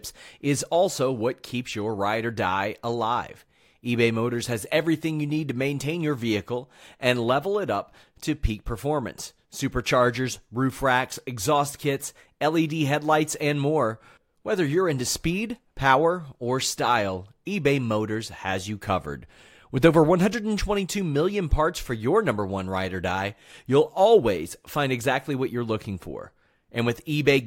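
No technical faults can be heard anywhere in the speech recording. There is no moment in the audio that needs a timestamp or an explanation.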